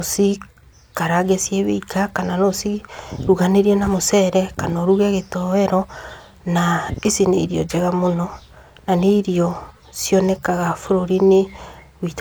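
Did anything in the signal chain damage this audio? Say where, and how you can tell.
No, nothing damaged this audio.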